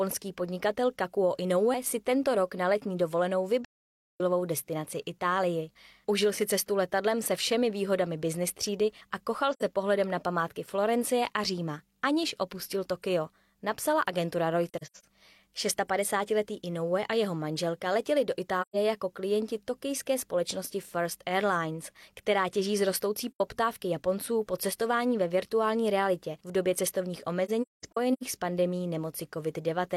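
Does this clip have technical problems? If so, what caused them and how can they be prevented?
Yes. AAC frame loss with muting cuts soft-edged holes into the speech at 3.65–4.21 s, 9.53–9.63 s, 14.69–15.05 s (scattered, longest about 100 ms), 18.61–18.76 s, 23.31–23.41 s and 27.45–28.23 s (scattered, longest about 200 ms). The decoder zeroes each missing frame of roughly 43 ms, and overlapping windows fade the sound out and back in. Add error protection or retransmission to the transport to prevent this.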